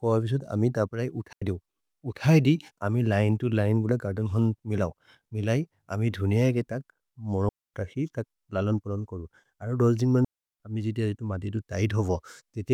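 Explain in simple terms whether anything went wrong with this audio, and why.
Digital wireless dropouts cut the speech three times. At 1.33 s the sound vanishes for about 0.09 s. At 7.49 s a quarter-second gap comes just before "तक् ललन् पुलन् कोरु". At 10.25 s, after "कोरु अरोह् दोल्जिन् मनु", it drops for 0.35 s before "अमि जिति". The wireless link lost too much data, so the receiver muted. Each gap is clean near-silence, with no crackle.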